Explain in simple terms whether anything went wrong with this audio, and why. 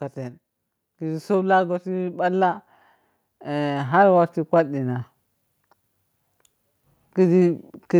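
Twice in this speech clip the sound slowly swells louder: from about 0.99 to 2.59 seconds, and again from about 3.26 to 5.1 seconds. The voice and the background noise grow together, so the room seems to creep closer. This is automatic gain rising. The recording's automatic level control judged the input too quiet and gradually turned itself up, lifting everything it picked up rather than the voice alone.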